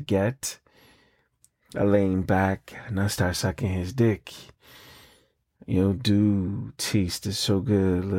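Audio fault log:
Nothing stood out on listening to this speech recording.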